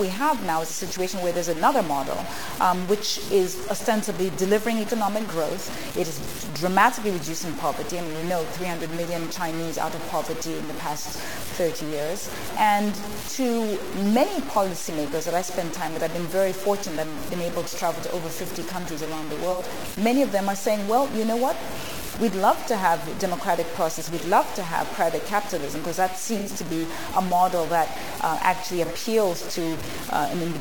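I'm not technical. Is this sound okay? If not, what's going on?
No. Low bit depth without dither runs through the whole clip, from start to finish. Everything has a heavy, gritty roughness that rises and falls with the sound itself, and quiet moments break up into a sputter or drop out instead of fading smoothly. The likely cause is that the audio was stored with very few levels of loudness, which fits about 5 bits, and each value was simply chopped down without a little added noise to mask the steps, so the error is loud and tracks the sound.

AAC frame loss with concealment happens three times: at 19.51 to 19.62 seconds, 26.38 to 26.49 seconds, and 28.85 to 28.92 seconds. Each time there's a brief smeared, noisy or phasey blip lasting roughly a tenth of a second or less. Small chunks of the compressed audio went missing, and the player patched each gap by guessing from the sound just before it. 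The guess is close but not right, so it smudges.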